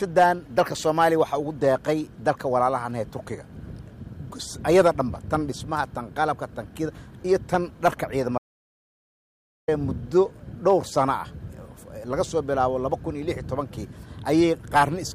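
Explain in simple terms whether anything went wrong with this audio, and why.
Yes, something went wrong. From 8.38 to 9.68 seconds, about 1.3 seconds long, the audio drops out to silence: the sound stops abruptly and then resumes partway through. The gap is dead digital silence, not even faint background hiss, and that is what sets it apart from a natural pause, where room noise carries on. The likely cause is the input being lost for a moment while the recording kept running, so whatever happened in that stretch is gone.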